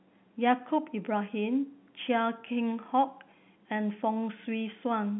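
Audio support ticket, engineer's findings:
No faults found; the speech comes through as normal G.711 A-law telephone audio at 64 kbps, with nothing above about 3.8 kHz.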